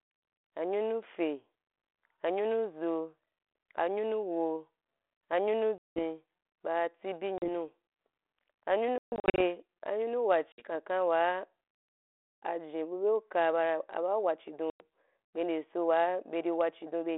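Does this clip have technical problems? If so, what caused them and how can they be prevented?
Yes. The speech suffers packet loss on an ADPCM call, heard as hard-edged silent gaps at 5.78 s (about 180 ms), 7.38 s (40 ms), 8.98 to 9.41 s (280 ms scattered over 400 ms, longest run 140 ms), 10.52 s (60 ms) and 14.70 s (100 ms). The 32 kbit/s ADPCM stream stays light in its own damage. After each hole, the receiver's adaptive predictor and step size have drifted from the sender's. So the sound resumes slightly distorted before resettling. Prevention needs a cleaner network path with jitter buffering and concealment that resets the decoder state after gaps.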